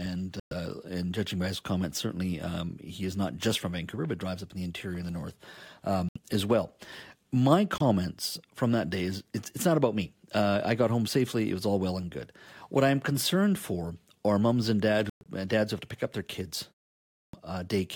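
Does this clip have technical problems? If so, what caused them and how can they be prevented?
Yes. Corrupt frame muted at 0.40–0.52 s, 6.09–6.17 s, 7.78–7.82 s and 15.09–15.27 s: damaged compressed frames were rejected by the decoder and replaced with silence, leaving abrupt holes whose lengths point to runs of roughly one to eight frames. Timing stays intact around each gap. Prevent it with error-protected transport or retransmission, plus concealment that interpolates lost frames instead of muting them.

Clipped start after a pause at 16.98–17.33 s: after a short silence of about 0.33 s, the output device dropped into a sleep state and needed time to wake, so the first 0.35 s of speech was swallowed and the sound begins abruptly. Prevent it by keeping the device active during silence or disabling its power-saving idle mode.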